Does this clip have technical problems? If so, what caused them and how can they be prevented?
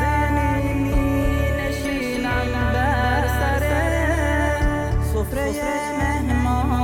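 Yes. A doubled audio track runs throughout: a full-band copy trails about a third of a second behind, a few dB quieter, with no decay like a room echo. It was likely captured twice via a slower second path; monitor only one input route and mute duplicate feeds.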